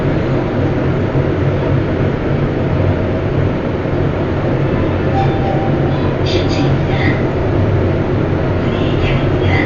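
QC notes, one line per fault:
Throughout: Dolby Digital compression, heavy. The sound is dull, with nothing above 6.9 kHz and rough, fluttering noise around tones, likely from an AC-3 encoder at a bitrate near 48 kbps, leaving many lines without mantissa bits to be filled with dither noise. The spectrogram shows a flat ceiling at 6.9 kHz and grainy, speckled fill below it.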